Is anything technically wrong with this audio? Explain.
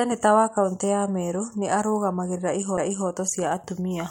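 Yes. At 2.77 s there is a CD skip: the laser jumps to another turn of the disc's spiral, muting for a few milliseconds, so the speech ticks and resumes elsewhere.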